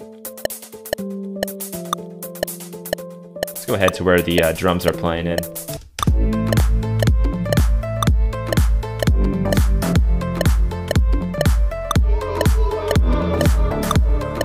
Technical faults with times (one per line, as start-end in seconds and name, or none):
0.63 compressed frames skipped
2.44 block of digital silence
3.53 compressed frames skipped
6.60 block of digital silence
7.60 block of digital silence
9.92 compressed frames skipped
10.38 block of digital silence